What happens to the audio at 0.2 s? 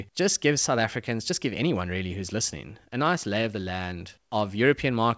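At 0.2 s the speech is already in a run of slight hiccups and a faintly hurried, uneven tempo. These are repeated timing corrections, running from 0.12 s to 5.04 s: the receiver keeps trimming short pieces, so playback advances at about 104% speed, with each cut small and irregularly spaced.

Behind those cuts is clock drift between sender and receiver, present throughout. The sender's clock runs roughly 5 percent fast, so the jitter buffer keeps overfilling and the receiver must keep discarding audio to stay in step, producing the recurring uneven hiccups.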